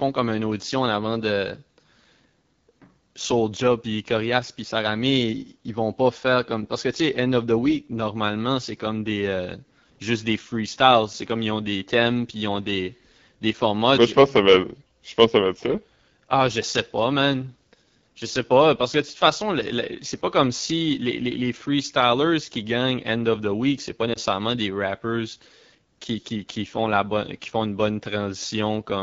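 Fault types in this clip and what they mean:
AMR wideband (HD Voice) codec: Throughout the clip the speech has a rough, raspy, buzzy texture. This comes from the wideband mobile codec running at one of its lowest rates, which fits the 8.85 kbit/s mode, where the pulse-based vocal tract model has too few bits per frame. The top band still has hiss-like air above 6.4 kHz. That separates it from narrowband telephone coding, which would sound muffled instead of rough.
lost AMR speech frames: Between "c'est pas" and "des rappers", at about 24.13 to 24.18 s, the voice briefly dips and warbles, which fits a single lost 20 ms frame. The decoder bridged the gap by reusing the previous pitch and vocal tract settings at lower gain, so the sound smears instead of cutting out. A packet dropout without concealment would leave a hard gap of silence or a click.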